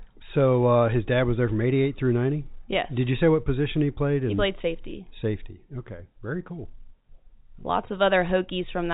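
Speech carried over G.711 telephone coding, limited to the narrow band below 4 kHz with the faint level-following hiss of that format, shows no technical fault anywhere in the recording.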